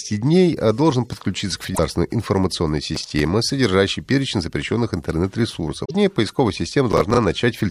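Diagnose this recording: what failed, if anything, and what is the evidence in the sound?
Damaged data in a compressed stream, at 1.71 to 1.79 s and again at 5.81 to 5.91 s, is a codec-stage failure: corrupted bytes made the decoder misread frames and lose sync, so it hunted for the next frame header, leaving a brief disturbance in the speech.

Processor overload crackle, from 2.95 to 3.19 s and from 6.92 to 7.17 s, points to the driver or buffer stage. A busy processor missed several deadlines on buffers of around 10 ms, replaying old audio with hard edges that gives a gritty tearing.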